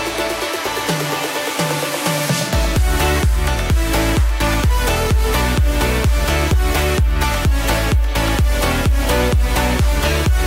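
No technical faults can be heard anywhere in the audio, which holds steady without any break, glitch or distortion.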